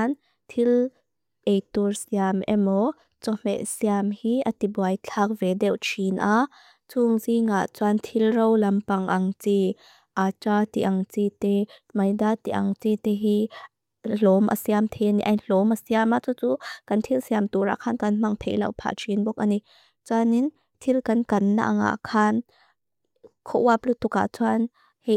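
No technical faults are audible anywhere in the speech recording.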